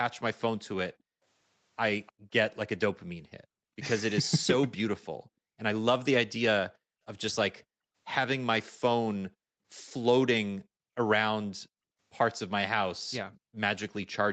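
At 0.94–1.22 s, 2.12–2.3 s and 6.7–7.05 s the background is gated by the echo canceller. The room tone drops by about 40 dB, then returns, rather than the speech itself breaking up. At 2.06–2.12 s and 5.02–5.06 s a faint copy arrives 298 ms late, about 30 and 40 dB down. This is likely echo leak, a delayed repeat rather than room reverberation.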